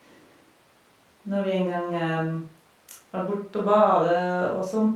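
Speech, with no audible technical faults anywhere in the clip.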